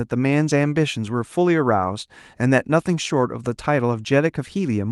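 Speech, with no technical fault to be heard. It has come through a WebRTC call path that is working as intended, with the high frequencies stopping near 12 kHz and the usual coding texture of what sounds like an Opus stream at roughly 32 kbps.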